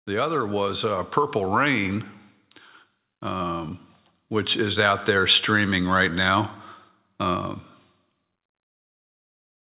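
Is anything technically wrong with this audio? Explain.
Yes. Automatic gain rising, 0.07 to 1.98 s: the gain control judged the input too quiet and lifted it about 4 dB, so speech and background swell together. The audio, which stops at 4 kHz, as a G.711 call path would, then holds that level.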